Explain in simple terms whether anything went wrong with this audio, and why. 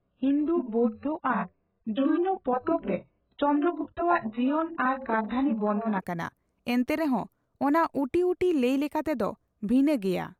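For the first 6 seconds the speech sounds dull and muffled, with nothing above about 4.1 kHz, plus a grainy, smeared quality. At 6.0 s it suddenly turns clear and crisp. This is an adaptive stream starting at a low bitrate: the player began on a cheap, heavily squeezed version to start fast, then switched up once it trusted the connection. Unlike a dropout or glitch, the switch happens with no gap or silence.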